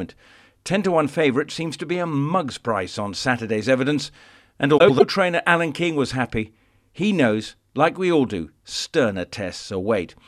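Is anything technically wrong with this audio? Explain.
Yes. From 4.78 to 5.02 s, just after "evidence and", there are frames out of order. Two neighbouring runs of about 104.5 ms each, which fits four frames per run, play in swapped order. The result is a brief garbled flutter. Unlike a dropout or skip, nothing is missing and no time is lost.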